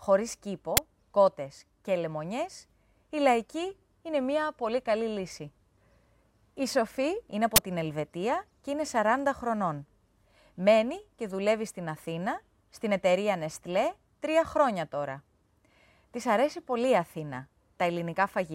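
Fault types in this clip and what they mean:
Uninitialised buffer: blocks played before audio was written into them, so leftover memory bursts out as loud digital noise, at 0.77 s and 7.56 to 7.58 s.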